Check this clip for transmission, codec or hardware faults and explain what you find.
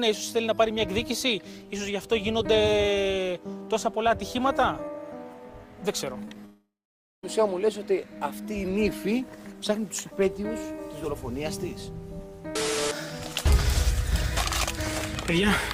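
Two transmission faults are audible, both packed into one second of the clip.

Short concealed packet loss hits three times, at 6.25 to 6.28 s, at 6.29 to 6.32 s and at 6.35 s. Small slices of audio arrived too late to decode. The receiver patched each gap by extending the sound just before it, then blended back in. The patches last 14, 18 and 5 ms. They are heard as quick smears, and 20, 10 and 10 ms of real audio are lost.

A long network dropout follows from 6.45 to 7.24 s. The likely cause is a stretch where no packets got through at all. The receiver first keeps the last sound going as a fading buzz or hiss. Then about half a second of silence remains. The audio resumes at 7.24 s. The roughly 0.78 s in between never comes back, so the sound jumps forward.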